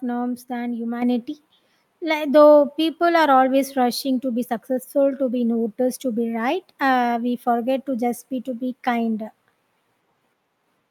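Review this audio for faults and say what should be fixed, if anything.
At 1.02 s the microphone volume is stepped up: the level jumps by about 6 dB in a single step, and the speech and the background noise rise together. That shared jump shows the change happened at the input stage, before any processing, when the call software judged the microphone too quiet and raised the device's input volume at once. To prevent it, disable automatic microphone volume adjustment in the call software and set the input level manually beforehand.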